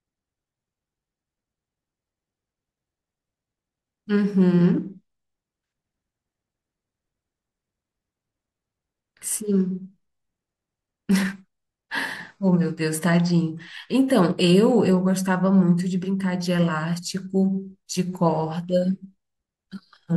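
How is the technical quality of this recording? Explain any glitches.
The technical quality of this recording is good, and there are no glitches to explain.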